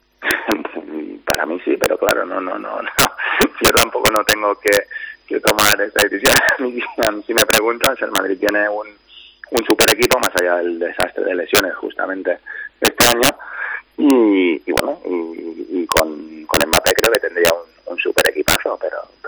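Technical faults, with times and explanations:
Throughout, integer overflow: loud peaks pushed about 10 dB past full scale wrap to the opposite sign instead of being limited, giving sharp cracks on under one percent of samples. The waveform shows sudden full-range jumps, and the spectrogram shows thin broadband vertical streaks.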